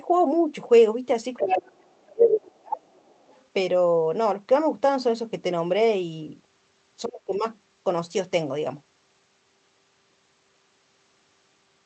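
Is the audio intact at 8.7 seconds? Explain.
Yes, at 8.7 seconds the speech is intact, with nothing there beyond the ordinary character of the Opus call path it passed through.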